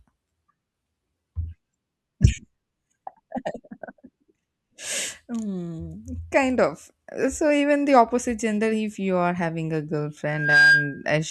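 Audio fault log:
2.00 s, damaged data in a compressed stream: a brief blip where a corrupted frame could not be decoded properly; the decoder lost sync, hunted for the next valid frame header, and resumed.
10.28 to 11.05 s, loudspeaker feedback squeal: a 1.6 kHz tone swells over roughly a third of a second to sit about 10 dB above the speech, because the microphone-to-loudspeaker loop had gain above one at that frequency and reinforced itself.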